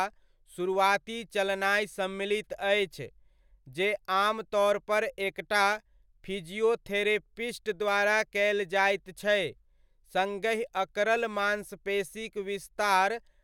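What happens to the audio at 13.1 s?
At 13.1 s the speech continues intact, with no dropout, click, distortion or other fault.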